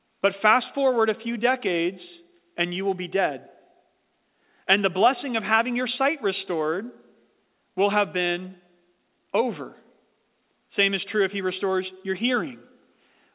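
Nothing stood out on listening to this speech clip, which comes across as a call recording with its sound confined below about 4 kHz, as a G.711 A-law connection would give.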